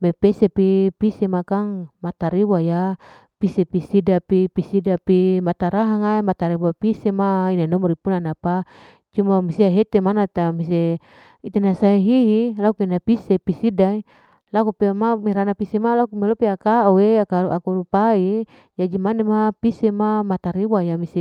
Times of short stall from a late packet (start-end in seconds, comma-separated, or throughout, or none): 14.43-14.48